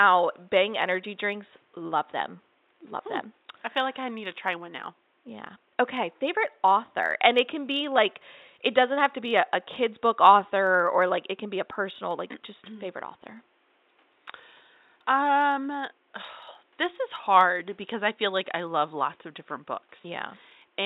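Speech recording, with room noise about 42 dB below the speech. Clock slip clicks run from 0.11 s to 20.84 s as a rapid ticking rattle, roughly every 30 ms. Each is one sample dropped or repeated, likely from two unsynchronised clocks differing by around 700 ppm.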